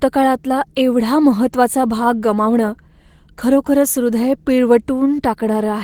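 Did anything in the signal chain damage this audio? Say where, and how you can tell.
Yes, at the codec stage: Opus voice compression damages the whole clip. Speech below 8 kHz passes through a linear-prediction coder with coarsely coded excitation, and a thin upper layer extends to about 20.3 kHz. The result sounds plainly hoarse and slightly robotic, which fits hybrid mode near 16 kbps.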